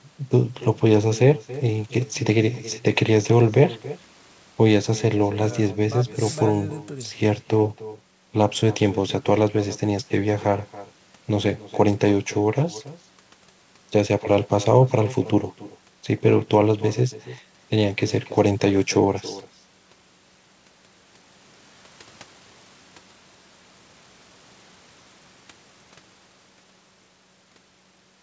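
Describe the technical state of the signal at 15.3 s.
At 15.3 s there's echo with no canceller, present throughout: the far end's loudspeaker feeds your speech back about a third of a second later, a thin copy about 18 dB down.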